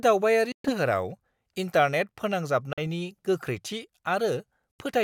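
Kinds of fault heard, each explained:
Bluetooth dropout: at 0.52–0.71 s, 2.73–2.79 s and 4.71–4.79 s the speech cuts abruptly to silence, losing about 122, 46 and 76 ms, then resumes further along as if it had kept playing, likely because packets reached the headphones too late and were discarded.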